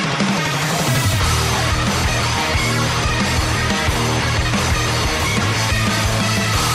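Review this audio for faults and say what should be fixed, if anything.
No faults turned up in the review, so nothing needs to be fixed.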